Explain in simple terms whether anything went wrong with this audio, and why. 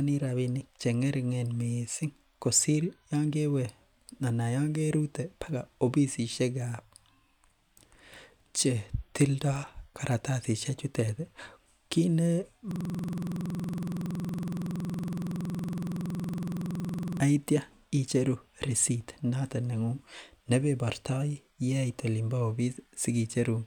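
The computer playing this speech froze from 12.71 to 17.2 s, a system hang loop. The sound hardware kept replaying the same short scrap of audio, about 46 ms long, which fits a 2048-sample buffer, until the system recovered. It repeats 97 times, about 21.5 times a second, so instead of speech you hear a rapid, mechanical rattling stutter that sounds stuck in place.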